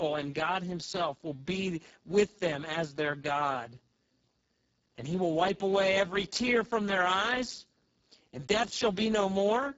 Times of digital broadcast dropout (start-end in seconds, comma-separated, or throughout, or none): none